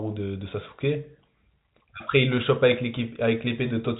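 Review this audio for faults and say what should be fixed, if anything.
Nothing stood out on listening, so there is nothing here that needs fixing.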